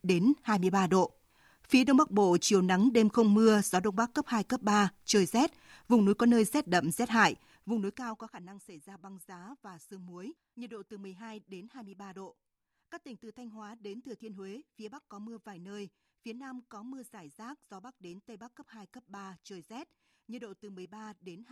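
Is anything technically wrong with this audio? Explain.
No, nothing is technically wrong with this audio.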